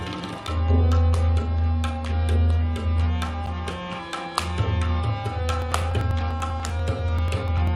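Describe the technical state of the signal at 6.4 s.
At 6.4 s you're right in the middle of periodic USB or driver dropouts, running from 5.62 to 7.67 s. Something stalls the audio path every 0.098 s and a couple of milliseconds get skipped each time, so you hear around twenty evenly spaced ticks.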